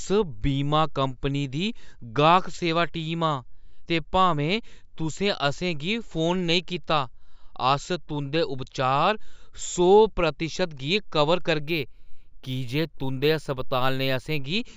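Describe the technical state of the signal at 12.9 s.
At 12.9 s the audio sits inside a stretch of imaging from linear upsampling, running from 11.66 to 14.44 s. The sample rate was raised by joining samples with straight lines, which fits a 16 kHz source lifted to 48 kHz. That weak interpolation dulls the top of the original band and leaves mirror images from 8 to 16 kHz, roughly 30 dB below the speech, heard as a faint metallic shimmer on sibilants.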